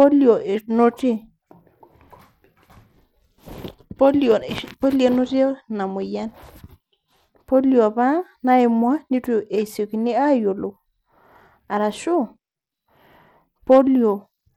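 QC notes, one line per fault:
throughout, Bluetooth SBC compression: the speech treble flickers and turns gritty with aliasing rather than stopping at a clean cutoff; likely SBC, sounding like roughly 96 kbps.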